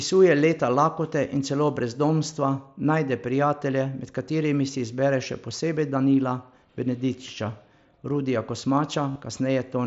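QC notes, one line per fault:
2.31 s and 9.11–9.16 s, concealed Bluetooth headset packet loss: a single short gap just before "najde prijatelje" is nearly hidden. The later 45 ms run is filled by repeating recent waveform, giving a brief buzzy hold and a small warble as the real mSBC audio resumes.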